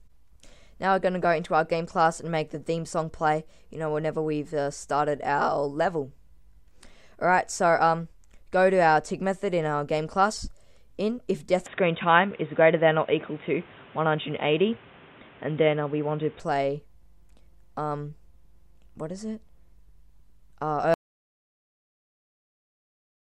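From 11.66 to 16.40 s, the sound turns dull, with nothing above 3.8 kHz. Level shifts by around 5 dB. This is likely an input switched to a poorer device. At 20.94 s, the audio cuts to dead silence and stays silent to the end. This is likely an audio dropout to silence.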